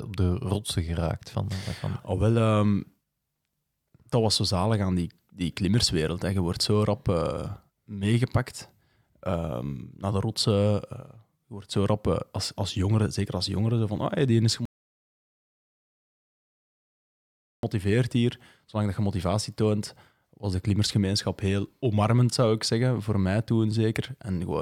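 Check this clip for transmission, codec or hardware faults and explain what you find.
One fault is audible: a rebuffering stall. At 14.65 s, just after "ah hey die is", the speech drops to silence until 17.63 s. The player had run out of downloaded audio and waited for more. Playback then resumes exactly where it stopped. Nothing is lost, but about 3.0 s is added.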